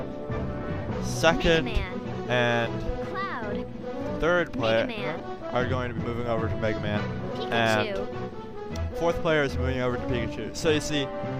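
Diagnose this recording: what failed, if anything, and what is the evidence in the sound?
The codec stage is where this one went wrong: there's damaged data in the compressed stream at 5.20 s. You hear it as a tiny blip, only a few milliseconds long, that doesn't belong to the surrounding sound. What's happening is that a stretch of the encoded bytes got corrupted, so the decoder misreads that frame, briefly loses its place, and has to hunt for the next valid frame header before it can carry on decoding cleanly.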